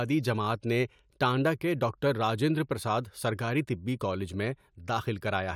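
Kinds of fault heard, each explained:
No faults turn up in this one, just ordinary speech with nothing odd to point at.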